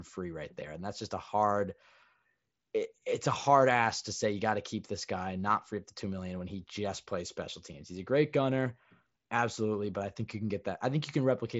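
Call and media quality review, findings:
No faults found in this audio.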